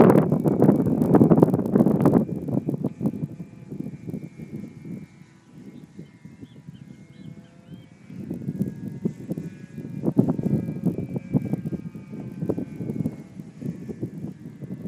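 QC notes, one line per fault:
Throughout: resampler restarted on every block. A 50 Hz buzz rides under the sound and stops in silence. Each 20 ms block is converted alone, so every block edge gets a small error. The doubling points to a 24 kHz to 48 kHz conversion.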